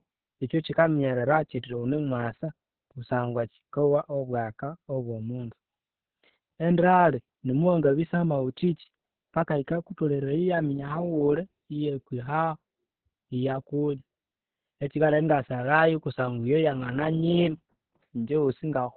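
From start to finish the speech carries heavy Opus voice compression. Nothing gets through above about 4.4 kHz, so it's squeezed into a narrow, phone-like band and sounds muffled. The excitation is coded so coarsely that voices come out hoarse and a bit robotic. That points to Opus running its SILK linear-prediction coder in narrowband mode at a very low bitrate, something around 6 kbps, which leaves too few bits for the detail.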